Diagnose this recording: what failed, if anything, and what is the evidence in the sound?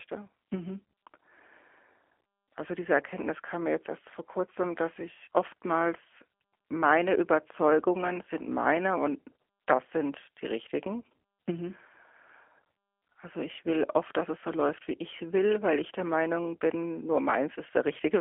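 The codec stage failed: the G.729 codec's rough, synthetic speech runs throughout with nothing above 3.5 kHz, consistent with an 8 kbit/s G.729 encode rebuilding each frame from a few pulses.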